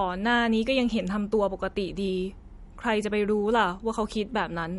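Speech with MP3 compression damage throughout, plainly audible as a watery, swirling texture and a dull top end. On a spectrogram the energy stops at a flat ceiling near 11.2 kHz, with weak bands blinking on and off between frames, likely from a low bitrate around 48 kbps.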